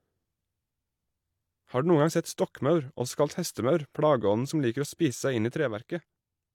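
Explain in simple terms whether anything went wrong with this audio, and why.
A sudden gain jump happens at 5.57 s, just after "inn i": the speech and the background noise drop together to a quieter level in an instant and stay there to the end. The likely cause is a volume setting changed in one step, without a smooth fade.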